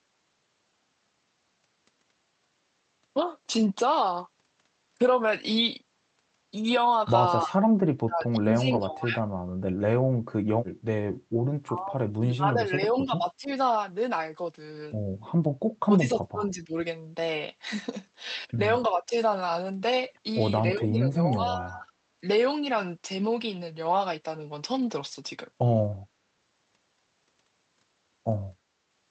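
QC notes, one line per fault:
7.46–7.53, 7.83–9.2, 11.65–13.5, 15.82–16.74, 18.9–19.14 and 20.75–21.91 s: speech suppressed in double talk. The speech ducks unevenly by about 10 to 30 dB, likely an echo canceller turning down the near talker while the far side spoke.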